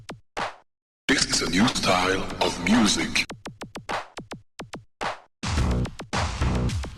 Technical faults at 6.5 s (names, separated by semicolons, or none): none